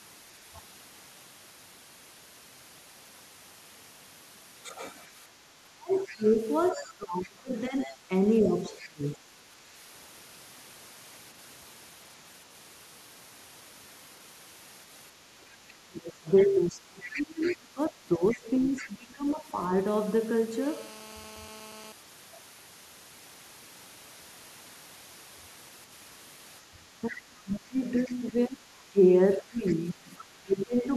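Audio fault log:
5.77–9.29, 15.19–19.51 and 26.7–30.95 s, speech suppressed in double talk: the speech dips by up to about 25 dB in patches while another voice overlaps, likely an echo canceller turning both down. Unlike random dropouts, the dips follow the overlap.
5.95–8.88, 16.7–17.55, 18.29–18.88 and 29.68–30.25 s, other side's voice leaking through: a second voice sits about 15 to 25 dB below the speech, likely loudspeaker echo left uncancelled. It is a separate voice, not a delayed repeat of the talker.
20.62–21.92 s, GSM phone buzz: a steady, raspy 217 Hz buzz with dense harmonics, about 22 dB below the signal, from a nearby 2G phone's call bursts being rectified. It is harsher than mains hum and is not at 50 or 60 Hz.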